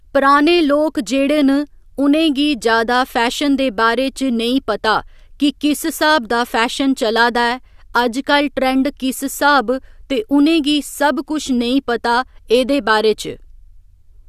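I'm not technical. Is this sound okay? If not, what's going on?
Yes, nothing stood out as a problem when listening to this recording.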